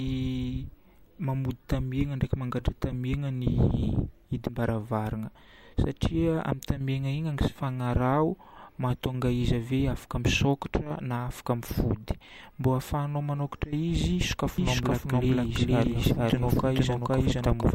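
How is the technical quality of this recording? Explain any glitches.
The recording has one clear glitch, near the end. From 14.58 s, right after "manokatra izy", a doubled audio track appears and runs to the end: the speech is mixed in a second time, about half a second late and at roughly the same loudness. The likely cause is a second, slower capture path or an edit that left two copies out of step. The copy starts abruptly, with no decay or room colour, so it sounds like a dry, full-band overlapping repeat rather than an echo. On a spectrogram, every speech pattern reappears as an identical shifted duplicate. The waveform shows overlapping envelopes of similar height.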